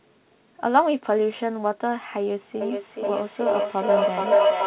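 From 2.61 s to the end, a feedback howl builds: loudspeaker output re-enters a microphone and each pass round the loop gains level. The sound narrows to a tone near 700 Hz, pulsing roughly every 400 ms and peaking about 7 dB above the speech.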